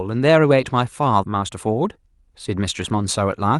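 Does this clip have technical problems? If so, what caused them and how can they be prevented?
Yes. At 1.23 to 1.25 s there's a skip ahead: about 0.4 s of speech was dropped and the two sides were spliced together almost seamlessly. Giving the buffer more headroom so it doesn't overflow would prevent it.

From 1.35 to 2.94 s there's a jitter buffer speed-up. The buffer trimmed tiny pitch-period slices, about a tenth of a second in total, so the speech runs about 107% fast at unchanged pitch. Smoothing network delay or allowing a gentler catch-up rate would prevent it.

The Opus call path itself is working normally, with its top end stopping around 12 kHz.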